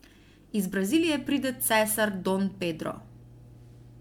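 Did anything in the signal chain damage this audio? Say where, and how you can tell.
Yes, at the codec stage. Throughout, the speech sounds swirly, smeared and hollow, with softened consonant attacks and nothing above 19.9 kHz. That is more damage than one 128 kbit/s MP3 pass explains, so this is likely generation loss from about four re-encodings, each re-quantising on a shifted frame grid.

There is also mains hum from the analogue wiring, running from 0.88 s to the end. It is a steady 60 Hz tone at about 25 dB below the speech, pointing to a ground loop. Its fixed pitch sets it apart from broadband rumble or handling noise.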